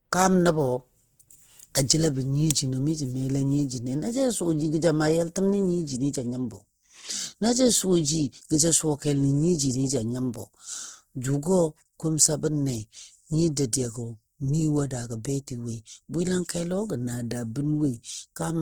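The speech throughout carries plainly audible Opus compression damage: consonants and vowels sound grainy and rough, with noise filling the spectrum rather than the swirling, watery holes of MP3. The band still reaches about 20.2 kHz, so this is likely Opus in its CELT music mode at a low rate near 16 kbps, not its muffled speech mode.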